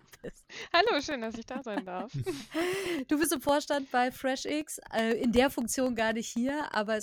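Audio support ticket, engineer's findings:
Periodic USB or driver dropouts, 0.12 s to 6.87 s. Regular ticks every 0.125 s (8 per second), around fifty in all, each a gap of roughly 1 ms filled with silence. Probable cause: a background task stalling the USB bus or audio driver. Waveform shows evenly spaced flat notches. Spectrogram shows thin vertical broadband lines at fixed spacing, audible only where signal is present.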